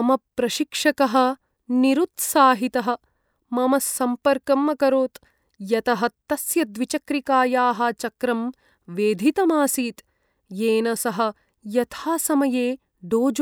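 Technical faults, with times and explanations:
No technical faults can be heard anywhere in the speech. Nothing in the recording calls for a time or an explanation.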